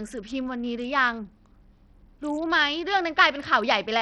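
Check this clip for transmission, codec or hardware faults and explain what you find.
One codec fault runs through the whole recording: heavy damage of the kind produced by Bluetooth SBC compression. Since the sound alone can't prove the path, SBC is the likely cause. From start to finish the speech has unsteady treble that drops out and flickers, with a gritty noise and aliasing riding on it. SBC splits the signal into a few wide bands and allocates bits crudely, without modelling hearing. At a low bitrate, here consistent with roughly 64 kbps, the quieter top bands are starved and everything else is coarsely quantised. Simple low-pass filtering sounds different: it removes the highs cleanly and steadily, while here they flicker and turn grainy.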